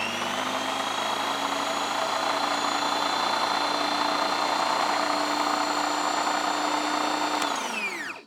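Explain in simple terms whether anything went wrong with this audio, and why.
Nothing went wrong here: the sounds in this recording come through with no dropouts, glitches or other technical faults anywhere.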